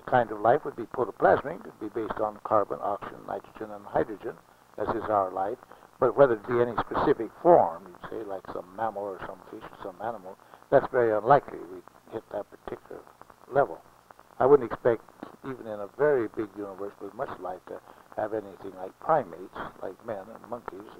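No technical faults can be heard anywhere in this audio.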